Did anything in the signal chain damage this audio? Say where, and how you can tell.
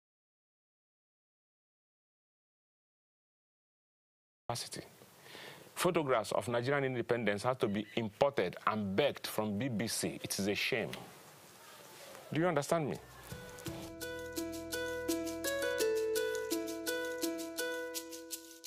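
Yes. The input link likely dropped while the recorder kept writing silence, causing an audio dropout to silence: dead, with no room tone, from the start until 4.49 s.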